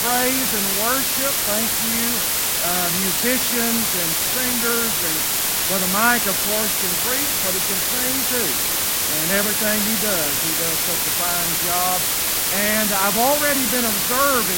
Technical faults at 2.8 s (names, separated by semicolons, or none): low bit depth with dither; corrupt frame decoded